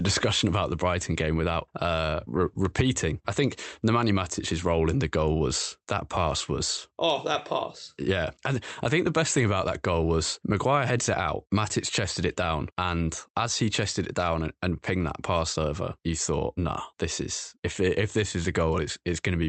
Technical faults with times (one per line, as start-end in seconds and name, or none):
none